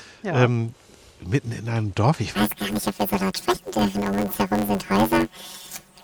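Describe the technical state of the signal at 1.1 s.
At 1.1 s the signal is intact, with no dropout, clipping, glitch or other fault to be heard at that moment.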